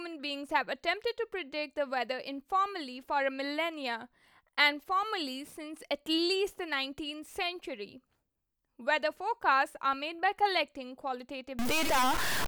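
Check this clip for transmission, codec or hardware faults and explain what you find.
One fault is audible, in the final second of the speech. From 11.59 s to the end at 12.48 s the sound turns harsh and buzzy, and quiet stretches fill with hiss instead of falling silent. This is a stuck bit, likely from a broken data line or converter holding one bit fixed. Roughly half the samples then shift by that bit's weight, a step of around -25 dBFS, producing waveform-dependent distortion and a noise floor that flips with the sign of small values.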